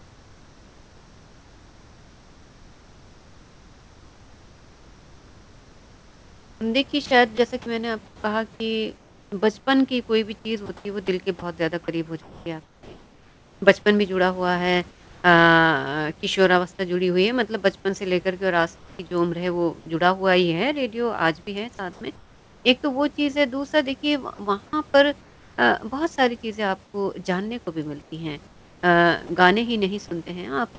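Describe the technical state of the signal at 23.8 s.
At 23.8 s the speech is intact, with nothing wrong in the signal at that moment beyond the expected G.722 call path bandwidth, which stops at 8 kHz, and the low room noise sitting about 31 dB beneath the speech.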